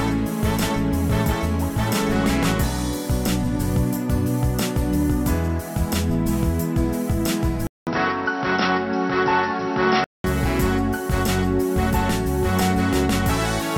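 At 7.67 s a gap of 200 ms precedes a sudden change in tone: until 10.24 s the audio loses everything above 5.8 kHz, sounds duller and boxier, and carries a new noise floor roughly 30 dB down, with no level jump. This is likely an input switched to a poorer device.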